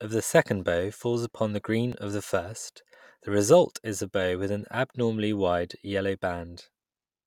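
At 1.92 s, between "bow falls upon the" and "of the first the", the speech jumps ahead, likely a dropped buffer (overrun) losing a few milliseconds.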